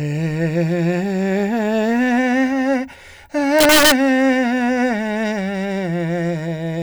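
From 3.59 to 3.92 s the music hits integer overflow: peaks pushed about 3 dB past the limit wrap to the opposite sign, giving harsh, violent cracks.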